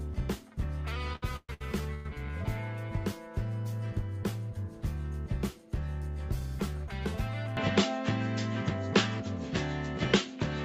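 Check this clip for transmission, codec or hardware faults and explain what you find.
Two faults stand out here: a patch of stuttering early on and a change in the input chain near the end.

From 1.13 to 2.06 s there are repeated stalls (stutter): five separate hiccups, the longest about 124 ms, adding up to roughly 382 ms of filler. Packets were arriving late or too slowly, so the jitter buffer kept running dry and the receiver stretched the last bit of sound to cover each wait. Nothing's actually lost, but around 41% of that stretch is concealment, so it drags and stammers.

At 7.57 s the character shifts and stays that way to the end. That's most likely the input switched to a poorer device, another mic or a headset's call profile. There's no gap at the switch, but from there on nothing comes through above 7.6 kHz, so the top end goes dull. The level moves by a few dB, and a new background noise turns up, sitting well below the signal.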